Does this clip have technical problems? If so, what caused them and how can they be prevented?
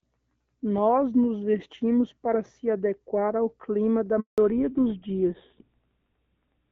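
Yes. A handover gap runs from 4.20 to 4.38 s. While the call was being passed from one network to another, no speech frames got through, so the sound dies away within a few tens of milliseconds and stays silent for 180 ms until the new link carries audio again. Whatever was said in that window is gone and cannot be recovered at the receiving end. Prevention: better coverage overlap between cells and make-before-break handover keep frames flowing during the switch.

A fallback to narrowband follows immediately, from 4.38 s to the end at 6.7 s. Before the gap the call sounds like HD Voice wideband coding, light and fairly clear, which fits AMR-WB at 12.65 kbit/s. After it, nothing is left above 4 kHz. The new link has dropped to an older narrowband codec, which fits GSM full rate at 13 kbit/s, and the sound turns duller and rougher. Prevention: ensuring the target network supports AMR-WB end to end keeps the call in wideband after handover.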